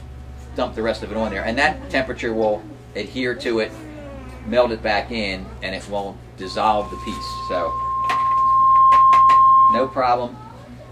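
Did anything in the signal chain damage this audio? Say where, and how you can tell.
Yes. From 6.42 s a single steady tone near 1.1 kHz rises out of the audio, swelling over about two seconds into a piercing squeal that ends up around 15 dB louder than the programme before it stops at 10.05 s. That is loudspeaker feedback squeal, arising at the acoustic and analogue stage: the microphone was hearing the loudspeaker it fed, and at 1.1 kHz the loop gain passed unity, so that frequency kept reinforcing itself.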